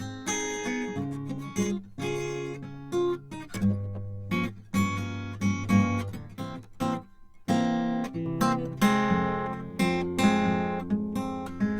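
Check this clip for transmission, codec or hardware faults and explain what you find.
There's one fault here: channel delay, which gives comb filtering on this music from the start to 8.26 s. One channel runs late by around 10 ms before the mono sum, so the shared content cancels at evenly spaced notches from around 40 Hz upward, leaving the mix hollow and phasey.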